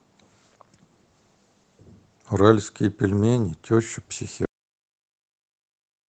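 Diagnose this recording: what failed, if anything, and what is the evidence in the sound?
Cut-off end at 4.45 s: the speech halts mid-sound and falls straight to digital silence with no decay, lasting the final 1.6 s. This is a buffer or storage failure. The last buffers were never written, so playback simply runs out of samples.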